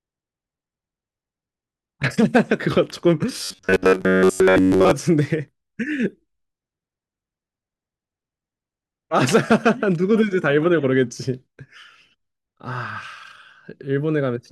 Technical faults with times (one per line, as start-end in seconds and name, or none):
3.41-4.91 robotic sound from repeated short buffers